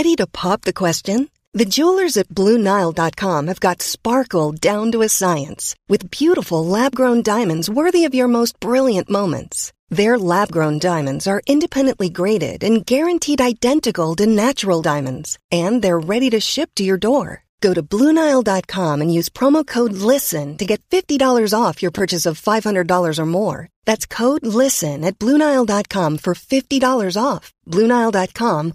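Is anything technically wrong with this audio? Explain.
Yes. There are two repeated buffer faults in the speech: at 2.64 s, right after "jewelers at", and from 21.98 to 22.00 s, after "off your". New audio arrived late, so the device replayed its last block, which fits a 10 ms buffer. It replays once in the first case and twice in the second, with essentially nothing lost. Each is heard as a brief click or buzz.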